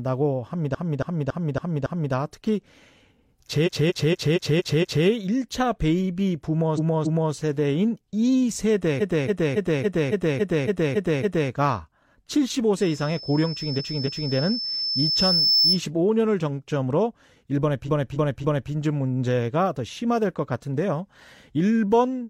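Speech, stuttering in six places where the same short block of sound plays back to back: 0.70–2.09 s, 3.63–5.02 s, 6.74–7.29 s, 8.97–11.47 s, 13.75–14.31 s and 17.84–18.67 s. These are repeated frames. A run of compressed frames was sent or written more than once, so the decoder replays about 0.28 s of audio (about 0.23 s in the second event), which fits a run of five or six frames. This adds up to 2.5 s at 8.97 s. Unlike a dropout or skip, nothing is lost. From 12.80 to 15.83 s a loudspeaker feedback squeal at 5.3 kHz grows over roughly two seconds until it sits a few dB above the speech. A fixed whistle or interference tone stays at a steady level. This tone swells by itself because the mic-to-speaker loop gain exceeds one at that frequency.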